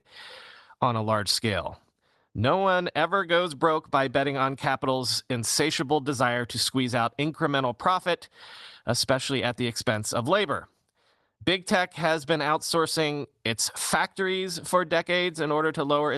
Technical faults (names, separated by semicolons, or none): clock drift between sender and receiver; short stall from a late packet; repeated timing corrections